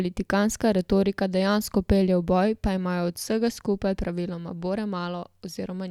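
A speech recording with no technical faults to report.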